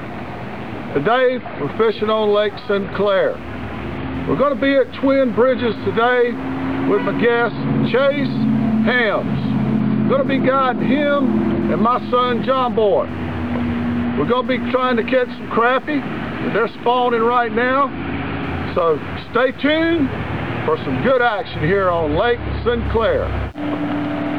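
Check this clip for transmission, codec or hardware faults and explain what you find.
One hardware fault runs through the whole clip: computer activity noise. Throughout, a buzzing, chirping or scratching layer pulses at a rate of around 150 Hz, roughly 40 dB below the wanted sound. Shifting load on the processor, graphics card or mouse moves the ground shared with the audio circuit, so this noise rises and falls with the computer's workload rather than with the program material. That fluctuation separates it from mains hum, which stays steady at the power-line frequency and its harmonics.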